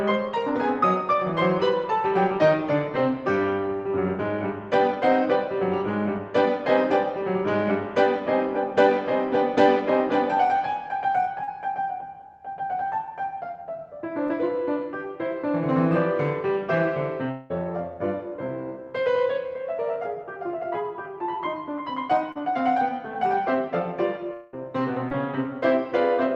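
At 11.43 to 11.49 s, 14.27 to 14.31 s, 22.32 to 22.37 s and 25.09 to 25.13 s, short concealed packet loss occurs. Between 20 and 40 ms of the music failed to reach the decoder in time each time. The receiver bridged each gap by extending the preceding sound before crossfading back into the real signal, so each spot is heard as a brief smear or wobble in the music.

At 17.31 to 17.52 s and again at 24.33 to 24.55 s, a longer hole of about 180 ms and then 200 ms appears, most likely a long network dropout. With nothing arriving, the receiver stretched the last sound into a fading continuation that fills the whole gap without falling silent. The music then resumes further along, with that portion gone. The dull top end, which fits an Opus call path limited to about 8 kHz, is audible throughout.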